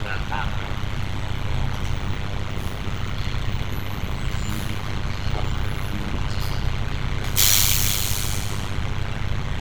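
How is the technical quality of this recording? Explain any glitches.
The technical quality is poor. One fault runs through the whole recording. Overlap-add ripple is present from start to finish. The audio was split into windowed frames and rejoined with an overlap that does not sum evenly. Level swings by about 60 dB once per frame, at around 100 times a second. This produces a harsh, metallic buzz with extra tones around each note over all of the sound.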